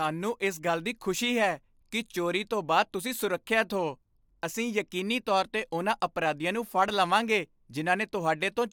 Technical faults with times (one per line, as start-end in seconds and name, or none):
none